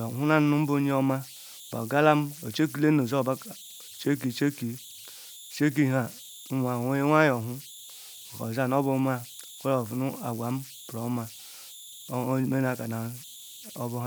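An undithered delta-sigma converter falls into repeating bit patterns on quiet input, so converter idle tones whistle near 4 kHz in pauses, with grainy noise about 20 dB below the speech throughout.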